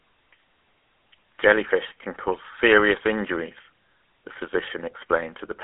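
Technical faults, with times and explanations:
throughout, GSM full-rate codec: speech is confined to roughly 150 Hz–3.4 kHz with a buzzy, gravelly roughness from pulse-driven excitation, unlike plain band-limiting's clean muffling; fits 13 kbps.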